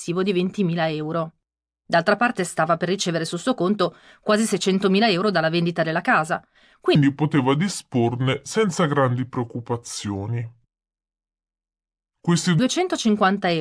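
From 6.95 s to 12.59 s the speech suffers a wrong sample rate fault. It runs at about 0.69 times normal speed and drops about 6.45 semitones, which fits audio recorded at 32 kHz being played out at 22 kHz without conversion. It sounds both slower and deeper. Pitch and tempo fall by the same ratio, and that locked pairing separates it from a pitch shift or time-stretch, which would alter only one.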